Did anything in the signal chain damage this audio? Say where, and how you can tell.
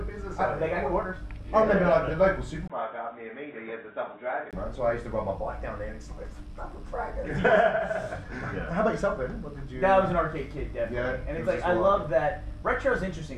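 Yes. From 2.68 to 4.53 s the sound turns dull, with nothing above 3.8 kHz, drops about 5 dB, and carries a new noise floor roughly 40 dB down, after a 20 ms gap. The likely cause is an input switched to a poorer device. Unlike a codec bandwidth drop, it brings its own level and noise.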